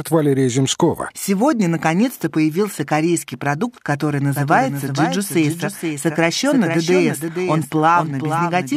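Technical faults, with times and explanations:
4.36 s to the end, doubled audio track: after "появился корейский продукт который", the speech is likely captured a second time through a slower path. A dry copy, around 5 dB quieter, trails about half a second behind. It starts abruptly and layers each syllable over the speech that follows.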